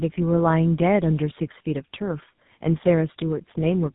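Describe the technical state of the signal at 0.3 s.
At 0.3 s, tandem speech coding runs through the whole clip: two speech coders in a row, likely AMR-NB then GSM full rate, re-encode each other's output, giving rough, muffled, warbly speech. A spectrogram shows nothing above 3.8 kHz.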